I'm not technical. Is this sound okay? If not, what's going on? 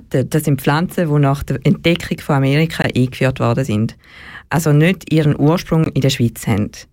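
No. The clip has a gap between chunks. The sound seems to arrive in pieces about 3 seconds long, with a tiny 20 ms silence at each join. One falls at 2.82 to 2.84 s, just before "eingeführt worden sind". Another falls at 5.84 to 5.86 s, right after "nicht ihren".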